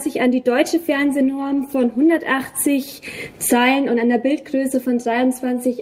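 From 0.8 s to 3.65 s the audio turns coarse and muffled in a call bitrate drop: the encoder's rate was cut, which fits a fall from roughly 64 kbps to 20 kbps, thinning detail and trimming high frequencies, worst for about 1.04 s before recovering.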